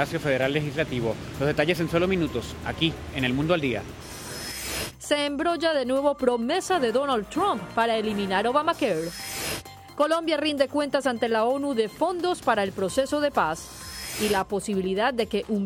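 No technical faults can be heard anywhere in the audio.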